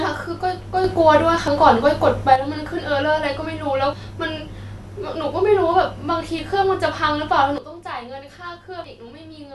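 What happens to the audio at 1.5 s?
At 1.48 s the speech skips: roughly 40 ms of audio is missing, and the two sides butt together with no silence between them. This is audio missing between chunks, likely from a processor losing a short piece while changing buffers, which fits a 2.5-second chunk size.

The skip falls inside a sudden gain jump from 0.84 s to 2.36 s, where speech and background noise step up together by about 6 dB with no ramp. The likely cause is a digital gain change applied from one sample to the next.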